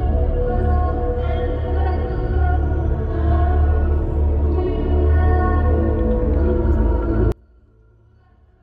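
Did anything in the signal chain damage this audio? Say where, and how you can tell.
Yes. From 7.32 s to the end of the clip at about 8.6 s, the sound collapses by about 36 dB to a faint residue. This is likely one channel inverted in the analogue wiring: with reversed polarity, the shared centre content cancels when the two channels are summed to mono.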